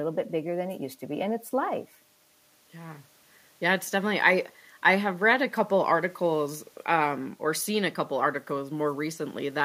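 No technical faults can be heard in the audio.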